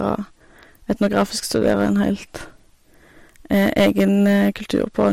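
Speech, hard clipped throughout: a stage was overdriven by about 9 dB, cutting flat the tops of roughly 2 percent of samples and adding harsh crackle on loud peaks.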